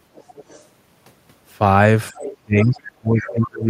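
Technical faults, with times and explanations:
0.15–0.66 s, 2.16–2.36 s, 2.6–2.8 s, 3.2–3.33 s: other side's voice leaking through. A faint second voice, about 30 dB down at first, then louder around 15 dB down. Likely residual loudspeaker echo left uncancelled.
2.11 s, 2.39–3.69 s: speech suppressed in double talk. The speech dips briefly by roughly 10 dB, then is held down up to about 25 dB to the end. Likely the echo canceller turning down both talkers during overlap.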